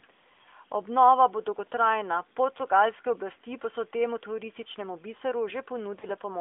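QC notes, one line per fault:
0.42–0.49 s and 6.00–6.05 s, lost AMR speech frames: The decoder fills each gap by holding the last good pitch and vocal tract shape at falling gain. The first gap spans two frames and stretches into a brief drawn-out warble. The second spans one frame and is a shorter dip. Neither gap falls to hard digital silence or clicks, which distinguishes this concealment from a plain dropout. The narrowband codec, consistent with AMR-NB at 12.2 kbps within a 200 Hz to 3.5 kHz band, is working normally around both gaps.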